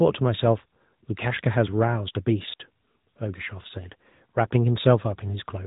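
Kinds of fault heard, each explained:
AMR narrowband mobile codec: The speech sounds boxed-in and plainly buzzy, with a synthetic edge and nothing above about 3.8 kHz. A phone-band codec rebuilds the voice from a vocal-tract model driven by sparse pulses, and the damage heard fits a rate near 10.2 kbps.
Digital wireless dropout: At 2.54 s the speech drops into a clean hole of near silence lasting 60 ms, ending at 2.60 s, with no noise burst on either side. The receiver lost too much data from the link and briefly muted rather than play corrupted audio.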